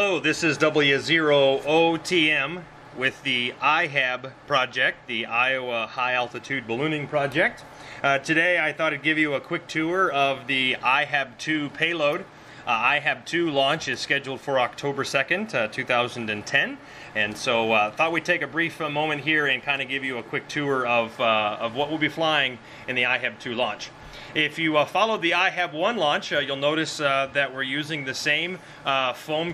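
No technical faults are audible.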